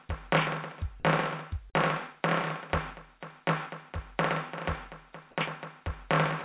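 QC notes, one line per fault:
1.70–1.75 s, short concealed packet loss: about 40 ms of the music arrived too late, so the receiver stretched the preceding sound to cover the gap before blending back, leaving a brief smeared wobble, dulled further by the band-limited call path's 4 kHz ceiling.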